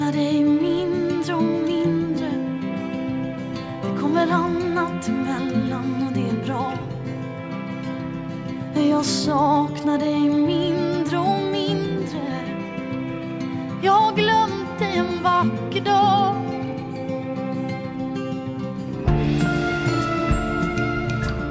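No technical faults are audible.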